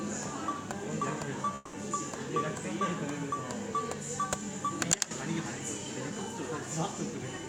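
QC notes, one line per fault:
1.55 to 1.75 s, long network dropout: about 180 ms of audio goes missing, and the gap gets papered over with a smeared, fading continuation of the preceding sound rather than true silence. That's likely the receiver concealing lost packets before the stream picks up again.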